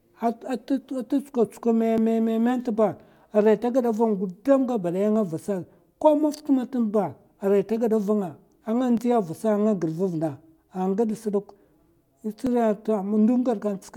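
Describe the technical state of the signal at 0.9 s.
Nothing is wrong with the signal at 0.9 s; the speech runs on cleanly through that moment with no audible fault.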